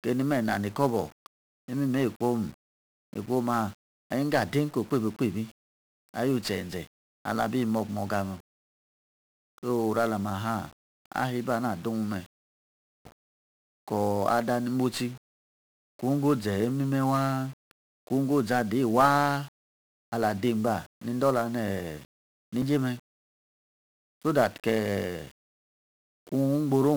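1-bit DFPWM compression runs throughout. Each sample steers an adaptive level up or down, so the speech sounds fuzzy and crackly, with treble lost in hiss, consistent with a 48 kbps stream. CD skips at 13.06 s and 22.62 s: the laser jumps to another turn of the spiral, giving a tick, a near-instant mute, and a sudden jump in the speech.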